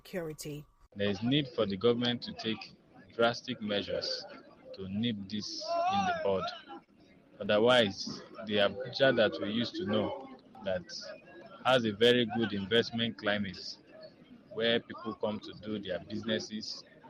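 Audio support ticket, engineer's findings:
Repeated stalls (stutter), 6.21–6.90 s: four short holds, longest 35 ms, jitter buffer running dry on late packets; receiver stretches last sound, nothing lost, just drags.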